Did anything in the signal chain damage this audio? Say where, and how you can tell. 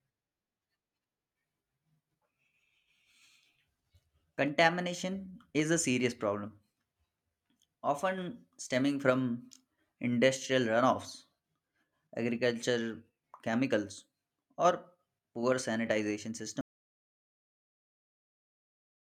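Yes. An audio dropout to silence begins at 16.61 s, right after "poor sanitization", and runs to the end. The speech cuts off mid-flow into silence with no room tone, so the input was likely lost upstream while the recorder kept writing silence.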